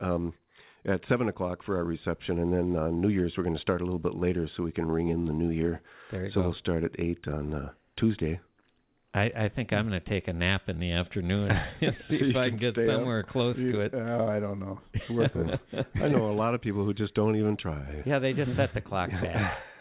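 The signal carries no faults, arriving over a WebRTC call path whose narrowband coding, consistent with G.711 mu-law, leaves nothing above 4 kHz.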